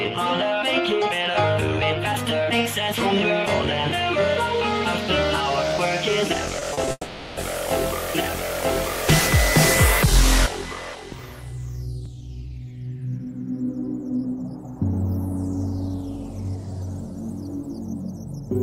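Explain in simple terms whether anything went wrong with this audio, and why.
Short concealed packet loss at 6.59–6.63 s, 6.73–6.79 s and 6.85–6.89 s: tiny pieces of sound arrived too late, so the player patched each gap by stretching what came just before, causing brief smears.

Long network dropout from 6.91 to 7.39 s: the sound is replaced by a fading continuation of the last moment, then a very short silence, likely because nearly half a second of data never arrived.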